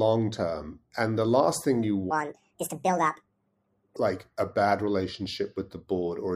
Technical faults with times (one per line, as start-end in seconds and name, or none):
2.11-3.96 section at the wrong speed